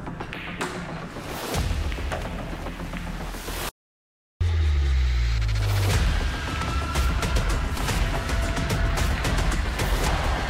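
At 3.69 s the input feeding the recorder was most likely lost, perhaps through a dropped connection or a momentary mute, while writing carried on with silence. This audio dropout to silence runs to 4.41 s, about 0.72 s of dead quiet with no room tone underneath. The sound stops abruptly mid-flow and resumes just as suddenly, and whatever occurred in that span is simply absent.

Later, compressed frames were skipped: the decoder never played short runs of frames, either missing or rejected as damaged, so the audio leaps forward at 6.62 s, 7.77 s and 10.06 s. The jumps discard roughly 70 ms, 150 ms and 100 ms, each a few frames' worth.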